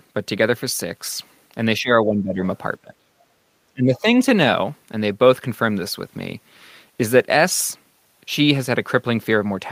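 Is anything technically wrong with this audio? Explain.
Yes, there's speech suppressed in double talk, three times: 1.79 to 2.40 s, 2.82 to 3.09 s, and 3.68 to 4.07 s. The talker suddenly drops away, by around 15 dB in the first stretch and more like 25 dB in the other two, so the voice thins out or nearly vanishes for fractions of a second. The likely cause is the other end talking at the same moment, with the echo canceller unable to tell this voice from loudspeaker echo and pulling both down.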